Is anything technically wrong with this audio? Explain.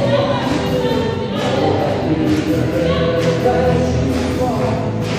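No, nothing technically wrong turns up here; the audio just runs along without any faults worth pointing out.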